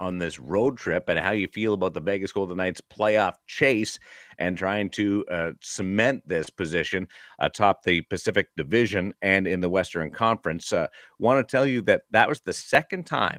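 Nothing goes wrong anywhere in this speech recording; it just comes through Opus voice compression at 24 kbps in its full-band hybrid mode, which leaves only light coding traces.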